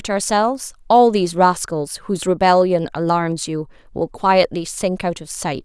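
No technical faults can be heard in this speech recording.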